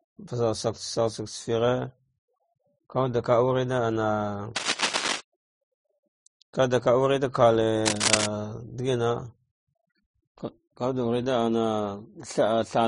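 From start to end the speech carries the layered damage of transcoding between lossy codecs, likely a low-rate Vorbis encode then re-encoded as MP3. The sound points to bitrates of roughly 30 to 40 kbit/s. Swirly, watery smearing sits on top of brittle, metallic pre-echo, because the second encoder wasted bits reproducing the first one's artefacts. On a spectrogram everything stops hard at 10.6 kHz, with blotchy, patchy texture below.

From 4.56 to 5.21 s, dense, uneven scratching rustles over the speech, likely cable scratch noise from a worn connector or cable shifting its contact resistance. It sits about 5 dB below the speech. The same fault returns from 7.85 to 8.26 s, now roughly as loud as the speech. The waveform shows ragged, spiky clusters, and the spectrogram shows broadband vertical smears filling both spans.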